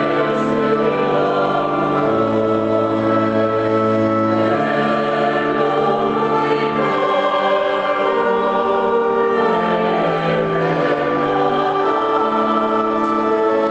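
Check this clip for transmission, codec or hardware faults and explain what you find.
One fault runs through the whole clip: gain pumping. The gain ducks by around 5 dB under each loud sound, likely from input gain set too high with a fast limiter clamping down. The call codec path, which tops out around 8 kHz, is working normally.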